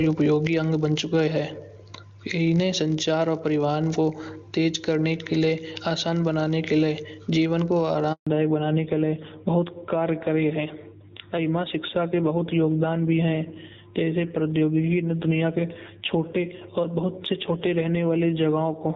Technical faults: block size mismatch (padded); gain pumping; handover gap; fallback to narrowband

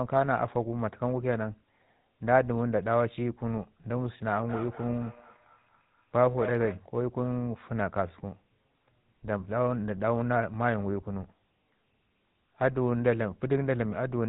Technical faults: GSM full-rate codec; feedback echo between two devices

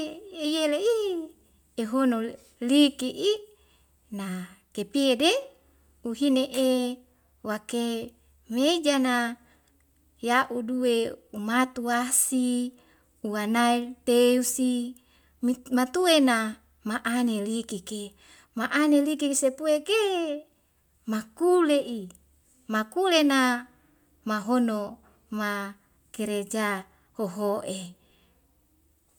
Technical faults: none

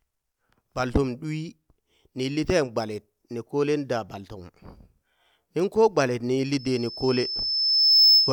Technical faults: loudspeaker feedback squeal

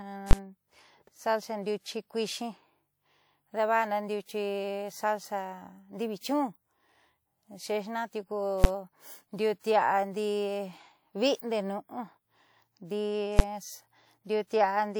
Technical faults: invalid numbers at full scale; pre-echo

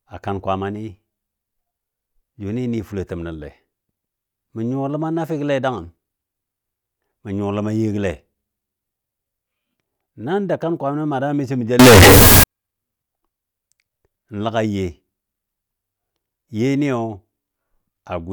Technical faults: float read as integer

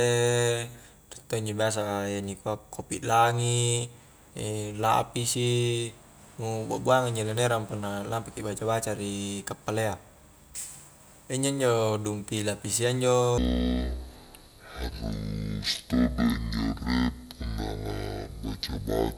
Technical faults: section at the wrong speed

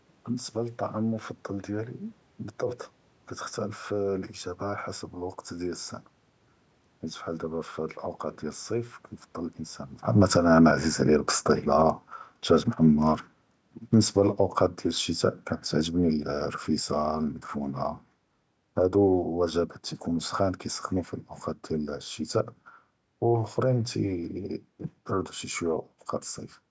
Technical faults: automatic gain falling

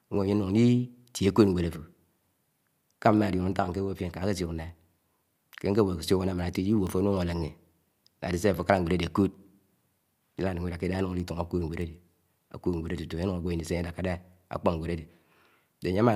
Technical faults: word clock ticks

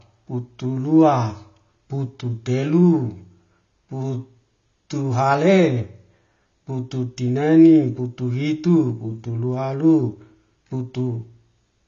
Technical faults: AAC compression

